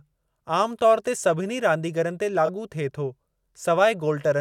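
A speech clip with two separate playback faults. At 0.49 s there is an underrun with held sample: the output buffer briefly ran dry, and the converter kept outputting its last value for about 2.3 ms. The waveform flattens, so the sound simply stops for an instant with almost no click. Because essentially no audio was lost while it waited, playback resumes exactly where it left off and the restart is soft. The second fault, from 2.46 to 2.49 s, just before "थिए थो", is a corrupt frame concealed by the AAC decoder. Flipped bits were detected, and instead of decoding garbage the decoder filled the span itself, about 34 ms long, rather than producing a squeak. That duration fits a single damaged frame.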